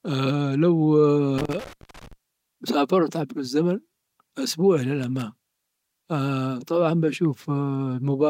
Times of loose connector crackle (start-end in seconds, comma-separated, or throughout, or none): 1.38-2.13, 5.03-5.22